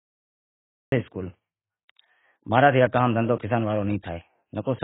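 The first 0.92 s is digital silence, then the speech cuts in abruptly mid-sound: a cut-off start from late capture, with no attack or fade, unlike a quiet natural onset. Throughout, nothing reaches above 3.8 kHz, and sibilants swirl and warble, pointing likely to heavy AAC compression at a very low bitrate, around 16 kbps, rather than simple low-pass filtering.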